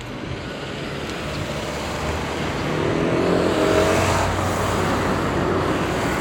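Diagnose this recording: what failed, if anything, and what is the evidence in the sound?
Nothing in this everyday-sound recording points to a failure at any stage of the chain, from capture to playback.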